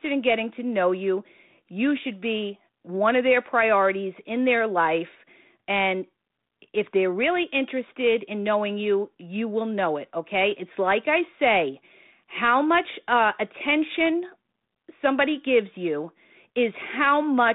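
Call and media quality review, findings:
No faults found on this call's speech path.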